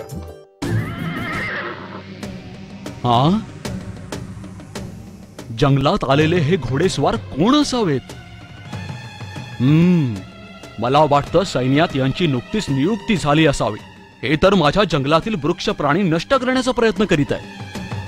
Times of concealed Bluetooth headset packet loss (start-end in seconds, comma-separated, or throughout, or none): none